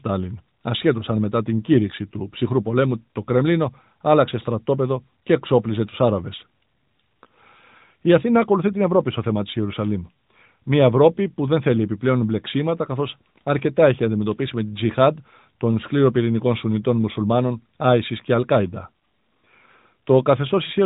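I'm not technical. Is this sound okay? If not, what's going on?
Yes, nothing stood out as a problem when listening to this speech clip.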